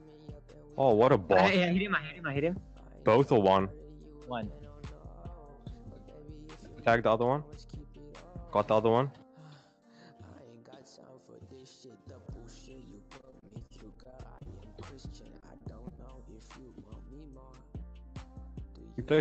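Repeated packet loss (robotic sound) chops the audio from 13.17 to 14.47 s and again from 15.41 to 15.99 s. Lost packets leave short holes, each patched by stretching the previous sound, so it turns choppy and robotic. The audio passes through an Opus call path whose top end stops near 8 kHz.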